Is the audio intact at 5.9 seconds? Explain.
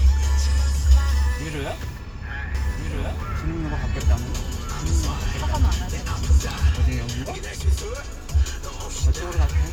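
No. From 2.55 to 6.69 s a doubled audio track plays: a full-band copy about 5 dB quieter trails roughly one and a half seconds behind, likely from a slower second capture path. A spectrogram shows every event repeated at that offset, starting and stopping abruptly.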